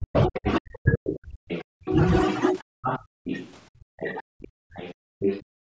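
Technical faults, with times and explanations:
0.00–2.86 s, 3.79–4.63 s and 5.65 s to the end, speech suppressed in double talk: the talker's level drops sharply, by roughly 40 dB at worst, for about 1.5 s, 1 s and a brief moment. This is likely the echo canceller turning everything down while both sides spoke at once.
0.15–1.91 s and 2.83–5.45 s, other side's voice leaking through: a second voice sits under the talker, only about 5 dB quieter. This is likely loudspeaker echo that the canceller failed to remove from the microphone signal.
3.14–3.24 s and 4.94–5.19 s, background gated by the echo canceller: the room sound drops out by about 35 dB and about 36 dB, for 0.1 s and 0.25 s. The canceller clamped the microphone hard while the loudspeaker played, then released it.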